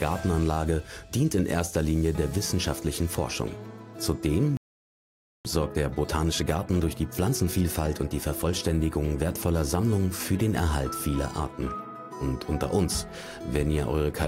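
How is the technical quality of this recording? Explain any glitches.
The recording has two linked glitches, both from the player rather than the source. At 4.57 s a playback stall begins: the player most likely ran out of buffered data or its thread was held up, so output drops to silence for about 0.88 s, resuming at 5.45 s. From 5.45 to 8.45 s comes time-compressed catch-up: the player trims its backlog by splicing out short segments and cross-fading the joins, so the sound runs at 1.15 times normal speed with unchanged pitch.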